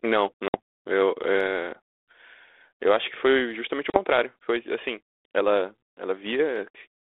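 A speech recording carried over a 32 kbit/s G.726 ADPCM link, band-limited to roughly 300 Hz to 3.6 kHz, with two instances of packet loss on an ADPCM call. At 0.48 to 0.55 s about 60 ms of audio, a few packets' worth, drops to a hard-edged silence, and at 3.90 to 4.00 s a shorter 40 ms gap, roughly two packets, does the same. After each hole the decoder's adaptive predictor and step size no longer match the sender's. The sound resumes slightly distorted, then settles within some tens of milliseconds as the adaptation re-converges.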